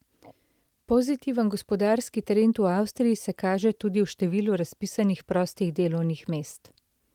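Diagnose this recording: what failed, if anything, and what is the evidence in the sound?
Nothing failed in this recording.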